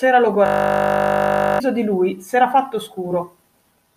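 From 0.46 to 1.6 s the speech freezes into a system hang loop: the machine stalled while the sound hardware kept replaying one 20 ms piece of its buffer, producing a steady 50 Hz buzz and swallowing about a second of audio.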